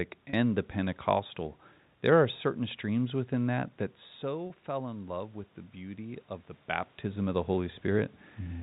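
At 0.30 to 0.33 s, and again at 4.47 to 4.50 s just after "streams within that that", the stream suffers packet loss with pitch repetition. Each gap is about 30 ms, which points to a single missing packet. To fill it, the receiver replays the most recent pitch period. Because each loss is so brief, the sound isn't cut off. Instead, it briefly holds and turns slightly buzzy before carrying on, over a narrow telephone band.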